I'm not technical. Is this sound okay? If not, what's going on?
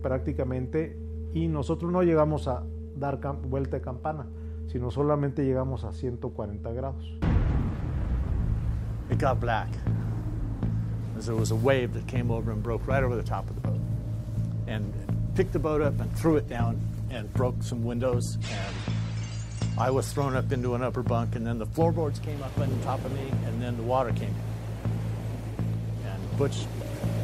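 No. From 16.22 to 18.90 s the sound turns rough and muffled: a call bitrate drop, where the connection squeezed the audio into far less data.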